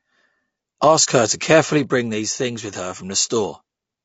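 A short speech clip carries plainly audible codec damage from start to finish, most likely from low-delay AAC compression of the AAC-ELD kind used in video calls. The voice sounds rough and grainy, with noise filling the gaps between pitch harmonics and a thin, somewhat synthetic top band. This fits a bitrate around 32 kbps. The short analysis frames of a low-delay coder separate closely spaced harmonics poorly and spend bits less efficiently, so at that rate the coder cannot hold a clean harmonic structure. From 1.04 to 1.08 s there is a brief dropout caused by AAC frame loss with muting. The decoder had no data for that stretch, about the length of a single frame, and replaced its spectrum with silence. Because the overlapping transform windows taper in and out, the gap fades down and back up rather than cutting abruptly, leaving a brief dip of roughly 30 to 40 ms.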